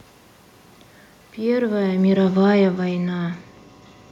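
It's a short speech clip with one real problem: automatic gain falling. From 1.39 s to 3.28 s the level slides down by about 10 dB as the gain control decides the input is too hot or its background noise too strong, and winds itself back. You can tell it's the system and not the talker because the room noise drops right along with the voice. The talker also shifts position around a second and a half, but that's just the performance.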